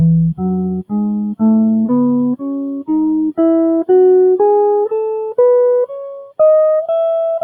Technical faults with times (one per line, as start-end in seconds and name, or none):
0.00-7.44 noise suppressor applied to music or sounds
0.34-1.43 sound cut by the noise suppressor